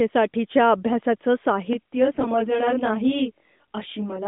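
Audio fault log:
1.73–4.28 s, channel delay (comb filtering): one channel trails the other by around 20 ms before both are summed to mono, so shared content cancels at closely spaced frequencies from roughly 20 Hz upward. At this delay the sound turns rough and slightly doubled to the end.
2.12–2.26 s, AMR bit errors: for about 130 ms, consistent with six corrupted 20 ms frames of the 12.2 kbps AMR-NB stream, around one bit in ten arrives flipped. Misplaced excitation pulses and skewed gain and spectral values turn the sound briefly hoarse and gargly.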